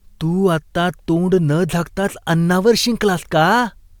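No technical faults can be heard anywhere in the recording. There is no event here that needs a time or an explanation.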